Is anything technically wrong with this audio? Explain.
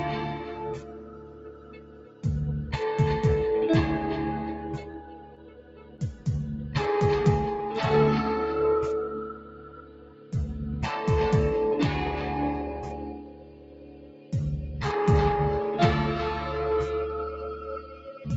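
Yes. A noise suppressor built for speech was left running on this sound, and there is one short stall from a late packet.

The noise suppressor applied to music or sounds works across the whole clip, treating steady tones, ambience and decays as noise and pulling them down, with gain swinging by roughly 15 dB. Onsets pass while sustained parts sink, so the sound pumps and thins. On a waveform the envelope breathes unnaturally. On a spectrogram, sustained bands fade and return in patches while transients stay bright.

Sound cut by the noise suppressor is clearest in five stretches: 0.33 to 2.24 s, 4.78 to 6.27 s, 9.22 to 10.34 s, 12.93 to 14.33 s, and 17.55 to 18.26 s. In each, held or decaying material is pushed down by up to about 11 to 13 dB, so tails cut off early and level sags. The waveform shows sudden envelope collapses after attacks. On the spectrogram, decays are truncated into dark gaps.

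The short stall from a late packet comes at 4.91 to 5.03 s. A packet arrived late and the jitter buffer emptied, so the receiver stretched the last sound by about 24 ms, then resumed where it left off with nothing lost. It sounds like a brief hold with a slight buzz or dip. A spectrogram shows a short smeared, flat-topped stretch, and the waveform shows a small repeated segment. In the call path, content stops at 8 kHz.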